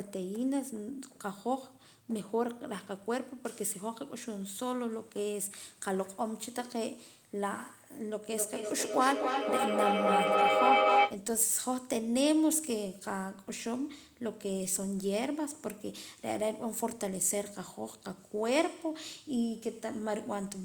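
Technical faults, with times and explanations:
8.31–11.26 s: feedback howl; unlike echo, each loop trip grows, building a tone near 700 Hz that pulses about every 0.3 s and peaks about 6 dB above speech.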